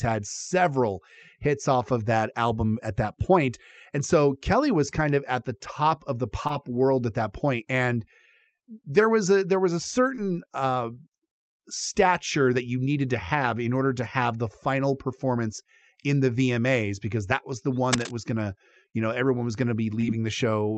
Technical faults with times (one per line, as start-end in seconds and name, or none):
6.47-6.51 short concealed packet loss
10.15-10.19 short concealed packet loss
17.92-18.11 cable scratch noise
18.89-18.95 short concealed packet loss
20.01-20.05 short concealed packet loss